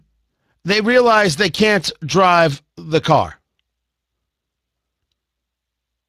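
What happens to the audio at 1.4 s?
At 1.4 s the speech carries Speex codec damage, present across the whole clip: the CELP coder's sparse excitation makes it hoarse and noisy, which fits roughly 22 kbps. Unlike a transform codec's swirly, watery artefacts, this is buzzy roughness, with nothing above 15.3 kHz.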